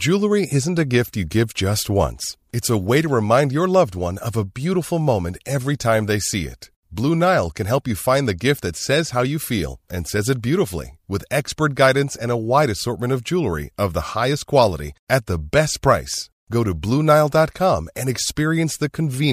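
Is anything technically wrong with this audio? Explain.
No, nothing technically wrong can be heard in this speech recording. There is nothing to point to at any moment in the clip.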